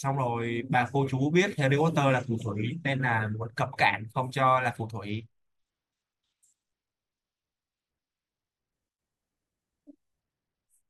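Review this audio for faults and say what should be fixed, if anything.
Bluetooth SBC bit pool drops at 5.09 to 8.72 s and 10.20 s onward dull the treble and add grit. This fits a congested link cutting SBC to roughly 90 kbps. Keep the phone close and reduce 2.4 GHz interference to prevent it.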